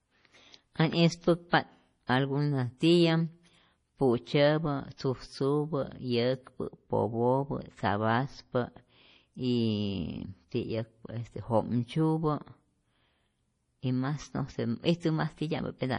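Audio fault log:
throughout, MP3 compression: watery, swirly speech with heavy smearing and nothing above 10.5 kHz, likely from low-bitrate MP3 encoding, which fits about 32 kbps.
6.67–8.67 s, de-emphasis applied wrongly: dull, muffled speech as an unneeded treble cut slopes the response down, about 10 dB lower at 10 kHz than at 1 kHz.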